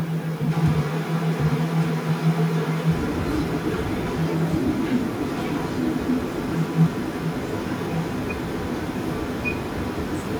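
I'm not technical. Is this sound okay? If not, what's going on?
No. From 0.5 s to the end, there's an echo leak: the voice repeats about 1.1 s later, nearly as loud. Likely someone's speakerphone is sending it back.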